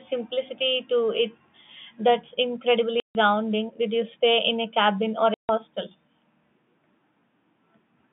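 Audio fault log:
3.0 to 3.15 s and 5.34 to 5.49 s (just after "in a cabin or"): packet loss filled with silence. Each 150 ms hole fits five 30 ms packets. Their edges are abrupt.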